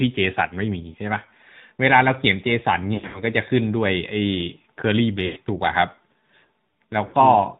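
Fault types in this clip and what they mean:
AMR narrowband mobile codec: This is the old 2G/3G phone codec. It runs at 8 kHz and rebuilds the sound from a vocal-tract model fed by a handful of pulses, so nothing above 4 kHz gets through. Here the damage is plainly audible: a muffled, band-limited tone with a buzzy, synthetic edge on the speech, which fits one of the mid-rate modes around 10 kbps.
lost AMR speech frames: Radio errors meant some frames failed their checksum, so the decoder reran the last good pitch and vocal-tract settings at falling gain. At 0.92 s a single 20 ms loss gives a quick dip. From 2.94 to 3.23 s about 160 ms goes missing across a 200 ms stretch, with the longest run 100 ms, so the sound smears and fades out. There are also 100 ms at 5.26 s and 60 ms at 7.06 s.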